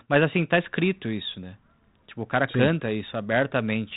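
No technical faults are audible.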